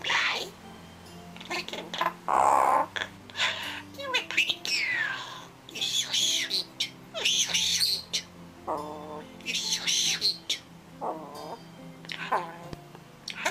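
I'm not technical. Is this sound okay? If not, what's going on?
No. There are two loud pops: a sharp, brief thump at 4.50 s and another at 12.73 s, each lasting about two hundredths of a second, with the second one noticeably louder. The sound carries on normally underneath both. The likely cause is a sudden jolt of electricity entering the recording chain, from something like a plug being moved, a switch, static, or a momentary glitch in the audio hardware.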